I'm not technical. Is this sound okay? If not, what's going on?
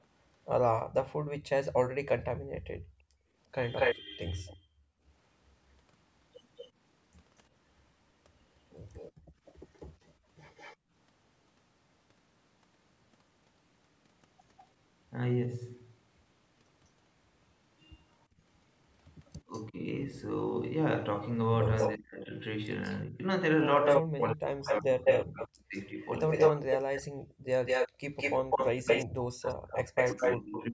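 No, there are three problems here.

Background gated by the echo canceller: from 2.29 to 5.04 s, 9.12 to 10.91 s and 27.89 to 28.04 s, the room sound briefly drops away, as the call's echo control clamps the microphone.

Echo leak: from 3.76 to 10.76 s a fainter copy of the voice trails about 0.24 s behind, and from 19.25 to 30.66 s a copy about 0.2 s behind is even louder than the talker, likely a speakerphone's own sound getting back into the call.

Speech suppressed in double talk: from 19.49 s to the end, the voice dips and cuts out for about 4 s in total, likely because both sides talking at once confused the echo control into turning everything down.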